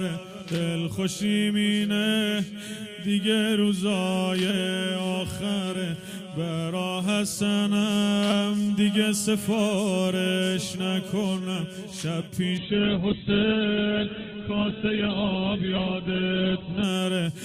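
Around 12.59 s there's a call bitrate drop: the bandwidth estimate collapsed, so the encoder switched to much coarser coding, which fits a fall from roughly 128 kbps to single digits. Everything above 4 kHz vanishes and the sound goes muffled and watery until 16.91 s.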